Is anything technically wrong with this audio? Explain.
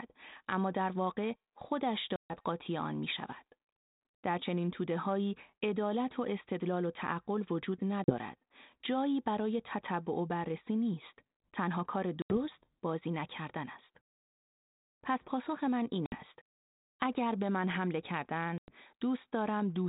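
Yes. There is packet loss on an ADPCM call at 2.16–2.34 s, 8.04–8.16 s, 12.22–12.38 s, 16.06–16.15 s and 18.58–18.74 s. Lost packets become silence, and the decoder's adaptive predictor and step size drift away from the sender's. Each hard-edged gap shows as a flat line in the waveform and a blank vertical band on a spectrogram. The speech then resumes slightly distorted, and settles within tens of milliseconds.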